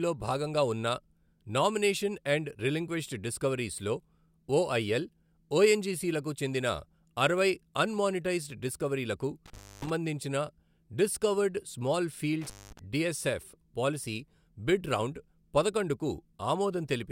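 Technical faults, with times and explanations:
9.46 to 9.90 s and 12.41 to 12.79 s, intermittent contact: a loose connection briefly opens, dropping the speech for about 290 ms and then about 210 ms, the second just after "డిస్కవర్డ్ స్మాల్" and before "డిఎస్ఎఫ్ పాలిసీ బిడ్ రౌండ్". Crackle marks each break and each reconnection, with faint hiss in between. On a waveform the signal collapses to near-flat with sharp spikes at both edges. A spectrogram shows vertical broadband streaks framing a near-empty gap.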